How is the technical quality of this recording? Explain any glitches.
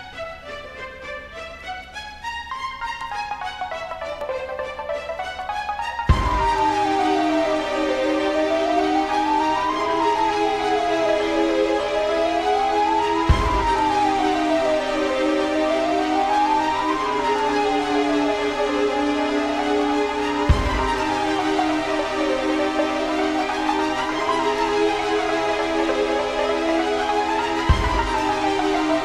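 No glitches turn up anywhere in the recording. There is nothing to explain, as no technical fault can be heard at any point.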